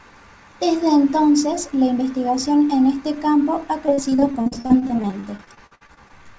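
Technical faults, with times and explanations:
3.86–6.20 s: repeated packet loss (robotic sound) after "en este campo ha". About 27 gaps up to 58 ms are patched by extending the preceding audio, so the speech sounds choppy with pieces missing.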